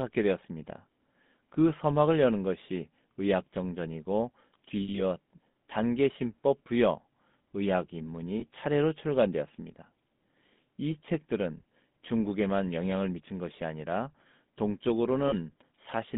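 A buzzy, gravelly roughness runs through the whole speech clip, confined to roughly 150 Hz to 3.6 kHz. That is the GSM full-rate codec, which fits a 13 kbps full-rate coder.

From 4.82 to 5.01 s, at 8.40 to 8.43 s, and from 15.28 to 15.34 s, the sound briefly freezes into a metallic ring. These are lost GSM frames, with the last good frame repeated. The first gap loses 120 ms in pieces over 160 ms, with the longest run around 70 ms.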